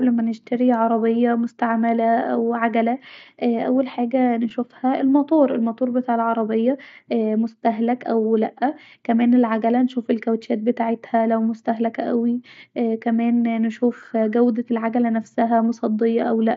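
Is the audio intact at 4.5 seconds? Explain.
No. At about 4.50 s there is concealed Bluetooth headset packet loss: roughly 7.5 ms of audio, which fits a single lost packet, never arrived from the headset, and the receiver filled the hole by repeating the best-matching stretch of the sound just before it. Because the gap is so short, the patch is nearly inaudible. There is no click or silent gap as with an unconcealed dropout, and no held buzzy tone or warble as with a longer run of losses.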